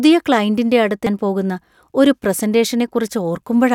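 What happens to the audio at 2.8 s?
Nothing goes wrong at 2.8 s; the speech plays through that moment intact, with no dropout, click or distortion.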